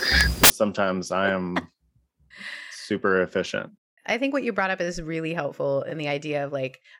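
From 0.0 to 0.5 s the speech is replaced by loud, harsh broadband noise from samples built from the wrong bytes. Misordered bytes push the fast-changing low bits into the high bits, which turns the signal into noise.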